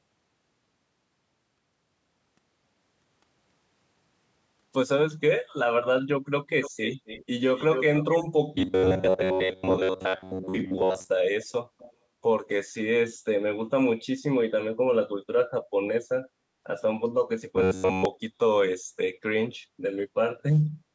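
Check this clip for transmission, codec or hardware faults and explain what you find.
Two kinds of fault appear in the speech: echo leak in three places and robotic buzzing from repeated short buffers in two.

Echo leak, 6.61–7.25 s, 7.56–8.25 s and 11.79–11.93 s: a delayed copy of the speech trails by about 260 ms, then 250 ms in the last burst. The likely cause is a far-end loudspeaker whose echo canceller let its pickup slip back. The echo is roughly 10 dB down, then 5 dB, then a faint 25 dB.

Robotic sound from repeated short buffers, 8.56–11.08 s and 17.56–18.05 s: audio likely arrived too seldom, so roughly a 10.7 ms buffer was replayed in place of most of the real sound. This imposes a rigid 93.8 Hz metallic buzz that only loosely tracks the speech. The call's microphone processing, with nothing above 8 kHz, is normal.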